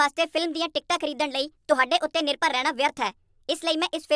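Wrong sample rate, throughout the clip: the speech plays back about 1.38 times too fast, with pitch raised by about 5.55 semitones, which fits audio recorded at 16 kHz but played at 22 kHz with no rate conversion. Because the samples are clocked out faster than they were captured, speed and pitch rise together by that same ratio, so the voice sounds hurried, thin and chipmunk-like from start to finish.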